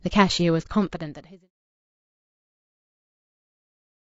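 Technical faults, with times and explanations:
throughout, low-delay AAC compression: the speech sounds plainly rough and grainy, likely from AAC-ELD coding at a rate that fits about 32 kbps. Its short frames blur pitch harmonics, so a spectrogram shows noise filling the gaps between harmonic lines and a smeared, synthetic-looking top band.
0.62 to 0.67 s, AAC frame loss with muting: a brief soft-edged hole with about 30 ms of audio missing, consistent with one lost frame whose spectrum was set to zero. Overlapping windows taper both edges, so the waveform shows a smooth dip to silence, and the spectrogram shows a clean vertical gap.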